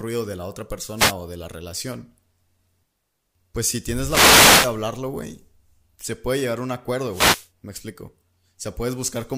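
Speech with three wireless microphone noise hits: short bursts of static at 0.96–1.13 s after "de la otra", 3.98–4.80 s after "pues si", and 7.07–7.49 s after "puede llegar a un", where reflections cancel the FM radio signal and receiver noise rises.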